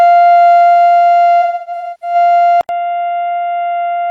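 From 1.42 to 2.15 s, AAC frame loss with concealment patches about 470 ms of missing music from old spectra, smearing it into noisy, phasey gaps, the longest around 0.3 s. At 2.61 s, after an 80 ms silence, the input likely switched to a poorer device: nothing above 3.8 kHz, roughly 10 dB quieter, with new background noise about 40 dB below the music.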